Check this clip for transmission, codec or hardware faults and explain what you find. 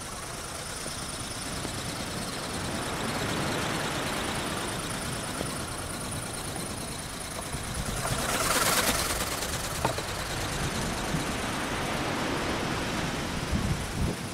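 Two loud pops are present, one from 1.65 to 1.67 s and another from 5.41 to 5.43 s. Each is a single sharp pop peaking about 15 dB above the surrounding audio. The likely cause is a sudden voltage step or pulse, such as a plug, switch, static discharge or driver glitch, shaped by the following circuitry into a brief thump. Unlike a dropout click, the sound continues uninterrupted underneath each pop, with no gap or missing section.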